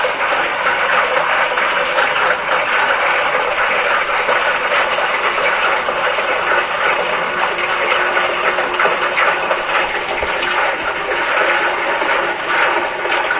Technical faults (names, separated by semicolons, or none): none